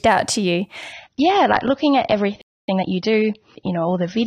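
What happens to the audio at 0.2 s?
Nothing goes wrong at 0.2 s; the speech plays through that moment intact, with no dropout, click or distortion.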